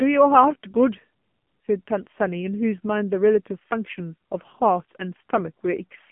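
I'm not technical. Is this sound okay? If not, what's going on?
No. From start to finish, the speech has gone through the AMR narrowband mobile codec, the squeezing used on older mobile phone calls. Everything above about 3.4 kHz has been removed, which takes away the crisp, airy part of the voice, and the very low end below about 150 Hz is gone too. The codec has worked hard to save data here, so the voice comes out noticeably buzzy and synthetic, like a poor phone line.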